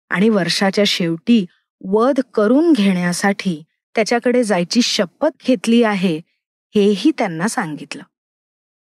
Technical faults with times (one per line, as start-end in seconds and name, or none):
none